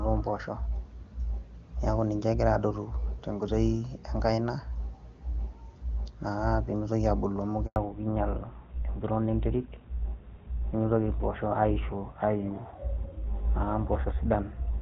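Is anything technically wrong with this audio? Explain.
Yes, two faults. The HD Voice stretch before 7.66 s is clear, consistent with AMR-WB near its top rate. At 7.66 s a handover gap occurs: the call switched networks and no frames arrived, so sound cuts out for 100 ms until 7.76 s. From 7.76 s to the end, a fallback to narrowband dropped the call to an older codec, likely GSM full rate. Nothing above 4 kHz remains, leaving the speech duller and rougher.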